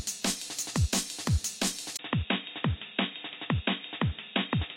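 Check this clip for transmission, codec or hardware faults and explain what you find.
One fault is present.

Input switched to a poorer device, from 1.97 s to the end: after a 20 ms gap, the band is cut off above 3.8 kHz and faint new background noise appears about 45 dB below the signal while the overall level stays the same, likely from the recording moving to a narrower-band microphone.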